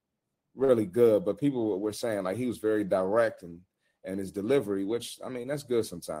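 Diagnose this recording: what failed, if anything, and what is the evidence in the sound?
Network's the culprit here: a short stall from a late packet. At about 0.64 s the speech hangs on one sound for roughly 55 ms, ending around 0.70 s, with a slight buzz or dip before it picks up again. A packet didn't show up on time, the jitter buffer ran dry, and the receiver stretched the last bit of audio, about 44 ms of fill, until it landed. Nothing's actually lost, but everything after plays 44 ms later.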